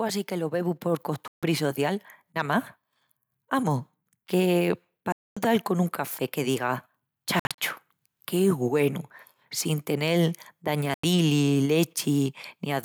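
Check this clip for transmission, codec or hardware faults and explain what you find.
Two faults are audible: a slow level rise at the start, and four short holes in the audio.

Automatic gain rising runs from 0.28 s to 2.64 s. The gain control judged the input too quiet and raised its gain by about 5 dB. Because it acts on the whole signal, the speech and the background noise swell together over those two seconds instead of jumping.

Four short gaps are heard. The first runs from 1.28 to 1.43 s and lasts about 150 ms. The second, the longest, runs from 5.12 to 5.37 s at about 240 ms. The third, from 7.39 to 7.58 s, is broken into several brief holes totalling about 130 ms, and the longest of them is 56 ms. The last runs from 10.94 to 11.04 s and lasts about 93 ms. Each cuts to silence, and the speech resumes further on, as though it had kept playing. This is likely a Bluetooth dropout, where audio packets missed their delivery deadline and were discarded.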